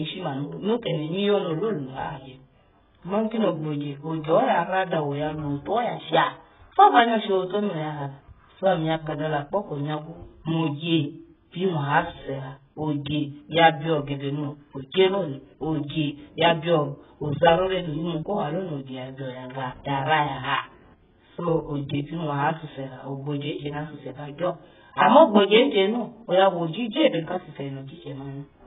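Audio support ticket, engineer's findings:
Speech dull, band-limited throughout; nothing above 3.8 kHz. Smeared, warbling sibilants and vowels, fizzy texture. Likely AAC compression, heavy damage pointing to a very low bitrate near 8 kbps. Spectral holes and watery warble distinguish it from a plain low-pass filter.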